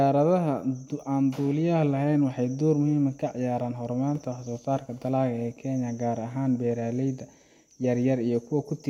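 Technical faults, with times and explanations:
Nothing to flag here, as the speech comes through without any technical problems worth noting.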